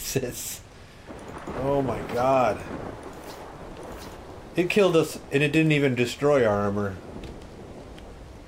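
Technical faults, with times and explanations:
No technical faults can be heard anywhere in the signal.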